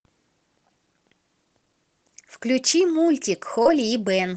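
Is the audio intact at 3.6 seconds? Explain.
No, there's a short concealed packet loss from 3.62 to 3.66 s: about 30 ms arrived too late, so the receiver stretched the preceding sound over the gap, leaving a brief smear.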